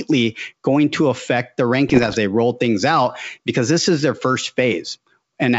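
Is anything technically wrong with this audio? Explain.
Yes. From 1.88 to 2.16 s, between "going to affect the" and "they roll things out", the speech has bit errors on an ADPCM link over the G.722 wideband path. Flipped bits at a rate under one percent corrupt the decoder's step size and predictor, so each error rings on briefly, producing pops, rough bursts and momentary level jumps.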